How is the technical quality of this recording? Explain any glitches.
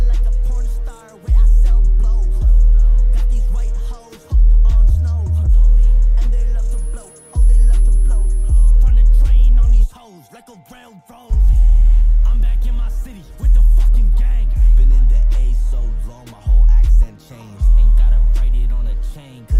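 One glitch stands out: a switching supply whistle from 6.71 to 8.71 s. A high tone near 10 kHz, drifting between about 10.1 and 10.4 kHz, sits roughly 35 dB below the sound. It comes from a switching power supply running in an audible burst mode or beating with another one.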